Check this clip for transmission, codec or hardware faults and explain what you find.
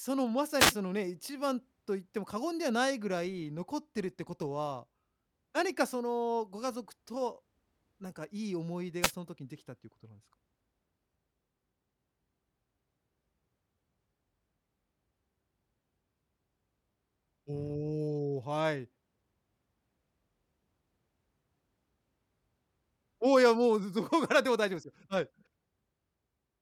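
Two wireless microphone noise hits break into the speech. Wireless microphone noise hits at 0.58–0.74 s and 9.02–9.12 s: the analogue FM signal briefly fades as reflections cancel, so receiver noise surges as a short swish of static.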